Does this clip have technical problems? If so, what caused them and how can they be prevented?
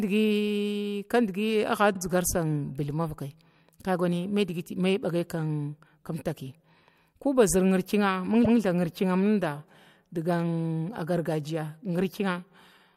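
Yes. Repeated frames at 1.93 s (48 ms replayed) and 8.44 s (144 ms) make the speech stutter, because duplicated compressed frames are decoded twice. On a spectrogram the same block appears twice back to back, with a seam at each repeat. Prevent this by checking frame sequence numbers so duplicates are dropped before decoding.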